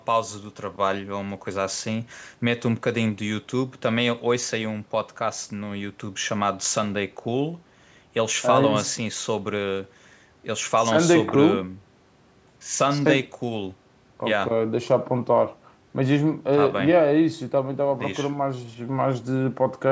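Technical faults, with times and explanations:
No technical faults found in the speech; the call microphone processing is working as normal, with its bass roll-off and nothing above 8 kHz.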